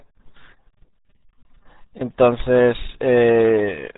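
RealAudio 14.4 codec damage runs through the whole speech clip. The sound is squeezed through a very low-rate speech coder, consistent with roughly 8 kbit/s, so nothing survives above about 3.8 kHz and heavy coding damage leaves the voice muffled and gargly.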